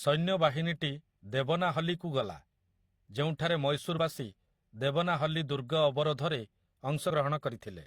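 Speech with two short bursts of damaged data in a compressed stream. They sit at 3.95 to 3.99 s and 7.06 to 7.11 s, lasting about 44 ms and 50 ms. Corrupted frames there make the decoder misread the bitstream and lose sync. It resumes at the next good frame, leaving a brief glitch.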